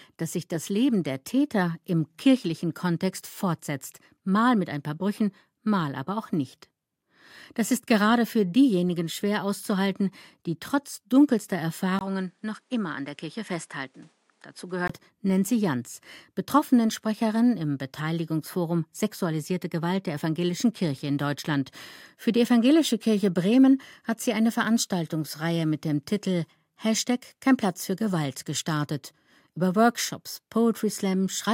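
Right after "auszuhalten die trotz dunkelster", at 11.99 s, the speech drops out for a 20 ms gap and returns duller, somewhat quieter, with nothing above 11.2 kHz and a faint new noise floor, until 14.90 s. The likely cause is an input switched to a poorer device.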